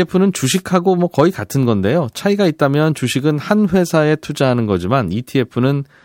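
From 0.42 to 0.62 s the radio link fades and receiver noise rises, a wireless microphone noise hit heard as a brief swish of static over the speech.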